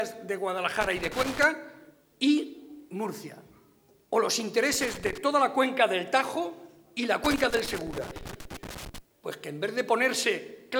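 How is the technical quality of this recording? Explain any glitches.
The recording has three bursts of loose connector crackle, at 0.81 to 1.44 s, 4.72 to 5.18 s and 7.24 to 8.98 s. A worn contact makes and breaks, chopping the signal into irregular scratchy pops, unlike steady evenly spread record-surface crackle.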